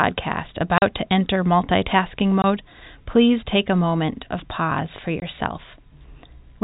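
Packet loss filled with silence hits the speech three times: a 40 ms hole at 0.78 to 0.82 s, just before "to enter multitasking"; a 20 ms gap at 2.42 s, right after it; and another 20 ms gap at 5.2 s, following "moment of pause for". Those lengths point to 20 ms packets that never arrived, replaced by dead air with hard edges. The narrowband telephone coding underneath passes cleanly.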